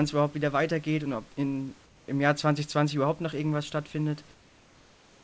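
At 1.86 to 2.08 s, after "weitergeht und ob in", the room background turns into a flat, featureless hiss about 4 dB quieter. From 4.34 s to the end it recurs, about 3 dB down. Transmission likely paused, leaving comfort noise in place of the background.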